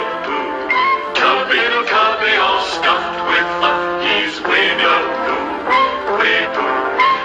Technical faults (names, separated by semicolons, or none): compressed frames skipped